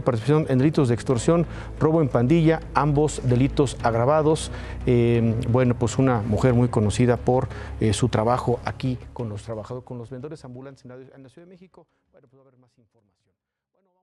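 No faults; the ending fades out smoothly, as edited.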